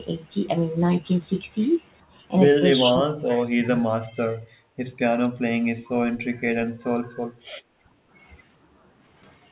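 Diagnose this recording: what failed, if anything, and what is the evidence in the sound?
The speech level dips sharply at 2.1 s, by about 15 dB for a split second, then again from 2.91 to 4.11 s, by as much as about 30 dB across roughly a second. At the call-processing stage, this is likely speech suppressed in double talk: the echo canceller attenuated the near talker along with the far-end echo.

From 3.34 to 3.45 s a faint delayed copy of the sound appears, trailing by 407 ms at about 20 dB below the speech. This is likely an echo leak: the far side's loudspeaker echo escaped its canceller and came back down the call path.

The room background dips from 4.4 to 4.77 s, by about 15 dB, and from 7.33 to 8.1 s, by about 10 dB, recovering each time. This is background gated by the echo canceller: during loudspeaker playback the canceller clamped the microphone gain, pulling the noise floor down until it released.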